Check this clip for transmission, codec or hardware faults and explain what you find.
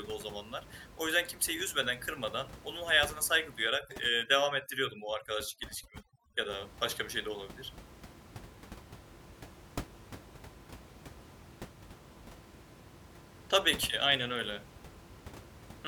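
One processing fault stands out, overdone noise removal, from 3.69 to 6.49 s, after "kırmadan onun hayatına saygı" and ending before "başka bir şey de". The room noise, sitting about 17 dB below the speech, drops there and breaks up into twinkling specks. A noise reducer set too hard is cutting individual frequency bands whenever they come close to its noise estimate, taking quiet speech detail with them. Unlike a low-bitrate codec, the damage follows the noise floor.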